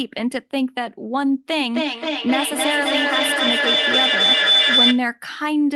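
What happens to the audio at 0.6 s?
Nothing goes wrong at 0.6 s; the speech runs on intact there with no dropout, click or distortion.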